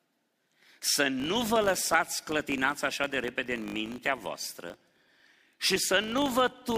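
From 1.2 s to the end, a filter restarted on every block starts each block from silence, adding a small transient every 20 ms. The result is a 50 Hz buzz that follows the speech level, showing as evenly spaced vertical lines on a spectrogram and waveform spikes.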